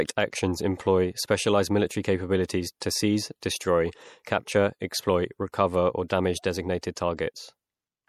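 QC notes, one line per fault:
throughout: MP3 compression. Codec damage is plainly audible across the speech: a watery, swirling quality, with metallic chirps on s sounds and smeared consonant onsets. This is likely lossy MP3 encoding at a bitrate that fits 64 kbps. With so few bits, the encoder zeroes weak frequency lines, and their switching on and off between frames produces the swirl. Nothing is present above 19.5 kHz, where the encoder cut the treble.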